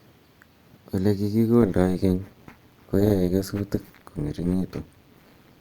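From 1.62 s to the end at 5.60 s, the speech carries overlap-add ripple. The audio was split into windowed frames and rebuilt with an overlap that does not add up to a steady gain. So the level swells and dips once per frame. The swing is about 11 dB. It repeats at around 200 Hz. That is fast enough to merge into a metallic buzz. The speech takes on extra tones around it throughout this stretch.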